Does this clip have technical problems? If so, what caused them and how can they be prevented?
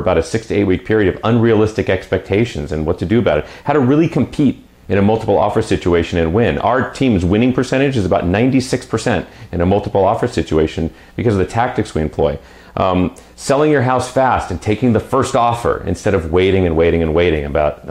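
No, this clip has no technical problems, so there is nothing to trace to a cause or prevent.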